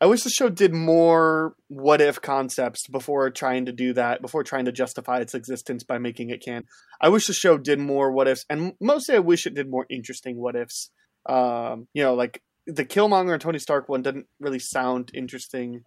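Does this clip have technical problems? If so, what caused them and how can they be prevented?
Yes. Between "existence by making it" and "I wish the show", at 6.60 to 6.64 s, a 44 ms garbled disturbance breaks the speech. This is likely a broken MP3 bit reservoir: frames were removed, so the frames after the cut decoded using another frame's bytes. On a spectrogram or waveform it appears as a short discontinuity where the speech pattern is abruptly disrupted. To prevent it, edit the uncompressed source or use frame-aware MP3 tools that preserve the bit reservoir.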